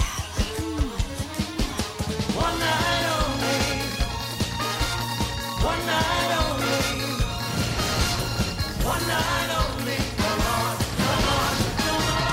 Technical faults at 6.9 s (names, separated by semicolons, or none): none